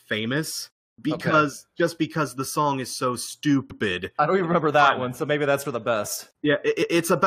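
Speech with two stutters from repeated frames: at 3.70 s a 107 ms chunk of compressed audio gets played twice, and at 6.81 s a 128 ms chunk does the same, so the decoder replays each stretch and the clip runs about 0.23 s long.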